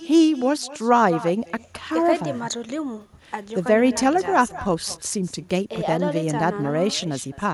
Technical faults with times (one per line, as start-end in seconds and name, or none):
0.00-7.54 echo with no canceller